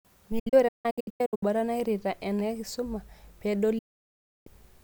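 From 0.39 to 1.43 s, before "nairrita enakisuma", a digital broadcast dropout leaves short silent holes of up to 160 ms, about 0.6 s lost in all; another gap spans 3.78 to 4.48 s. The receiver muted bad frames with 8 ms fades to clean silence, not clicks or smeared repeats.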